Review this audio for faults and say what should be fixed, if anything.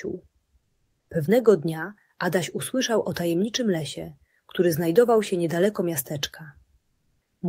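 From 0.59 to 1.09 s and again from 6.81 to 7.41 s, the real background gives way to a flat, featureless hiss, about 6 dB and about 9 dB quieter respectively, before the sound resumes. This is comfort noise in place of the background. The likely cause is discontinuous transmission, as in Opus DTX: the sender stops transmitting during quiet stretches, and the receiver fills each half-second or so gap with generated noise that only roughly matches the original background. Turning off DTX at the sending end would keep the true background in these pauses.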